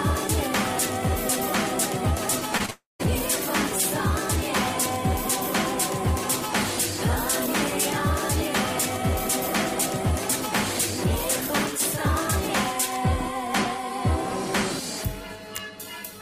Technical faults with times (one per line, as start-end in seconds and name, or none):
2.57-2.70 short concealed packet loss
2.70-3.01 long network dropout